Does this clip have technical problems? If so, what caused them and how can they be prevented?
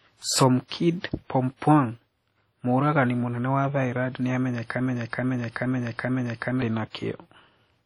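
Yes. Heavy WMA compression runs through the whole speech clip, likely from a low-bitrate encode around 32 kbps. Long transform blocks smear quantisation noise, giving a ringing, washy sound with breathing hiss. Nothing remains above 18.1 kHz. Encode at a higher bitrate or use a better codec.

Pre-echo appears from 0.66 to 0.71 s. Noise spreads about 51 ms ahead of a sharp attack. The codec spread it across the whole block, so the quiet lead-in hisses and the onset softens. Use an encoder with block switching for transients.

A broken-record loop runs from 4.81 to 6.62 s. A 429 ms fragment repeats four times, back to back. The player or stream probably stalled and resent its last buffer, losing the audio meant for that span. Add buffering and stall detection that mutes rather than repeats.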